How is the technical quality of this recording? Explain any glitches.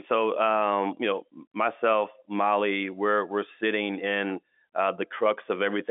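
Nothing stood out on listening: the speech comes through as ordinary telephone-band audio, and nothing in it calls for explanation.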